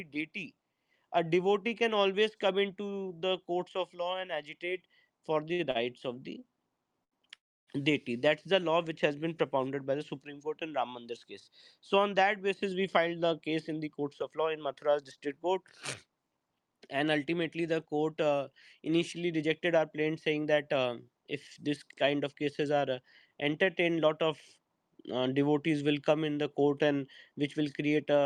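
From 5.48 to 7.14 s the audio suffers repeated stalls (stutter): it halts four separate times, the longest hold about 78 ms, with about 186 ms of filler spliced in and nothing lost. The receiver's jitter buffer kept draining because packets arrived late, so each stall stretches the last sound briefly before playback resumes. The result is a dragging, hiccuping rhythm rather than missing material. That separates it from the next fault, which is one long hold instead of several short ones. At 7.36 s playback stops for about 0.34 s, and almost all of that, about 300 ms, is plain silence rather than a fading continuation. It then picks up exactly where it left off, with no audio skipped, so everything after it is pushed later. This is likely a call audio freeze, with packets held up in transit until the buffer emptied. It is a single gap in one place, not a stutter, and it adds delay rather than removing any. 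Three stretches then run fast in jitter buffer speed-up: 12.98 to 14.66 s and 19.17 to 20.82 s at 108% speed, and 23.84 to 24.73 s at 107%. The receiver trimmed many tiny pitch-period slices to shed excess buffered delay, about a seventh of a second in each of the first two and well under a tenth in the last. Pitch stays put while the pace hurries, which is what distinguishes this from a simple fast-playback fault that would raise the pitch along with the speed.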